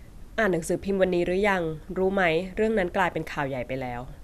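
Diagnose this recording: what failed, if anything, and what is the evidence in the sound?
Nothing failed; no stage shows any audible fault.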